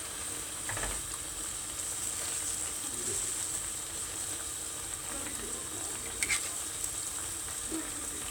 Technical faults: none

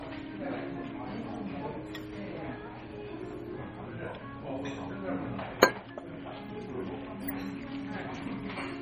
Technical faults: low-bitrate audio saved at a high bitrate

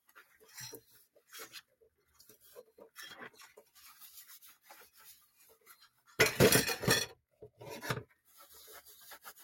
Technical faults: noise suppressor applied to music or sounds; sound cut by the noise suppressor

